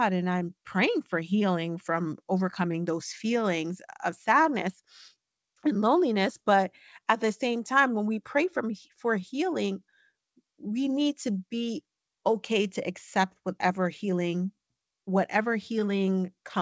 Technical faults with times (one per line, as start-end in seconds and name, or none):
0.00-16.62 clock drift between sender and receiver
0.10-16.59 repeated timing corrections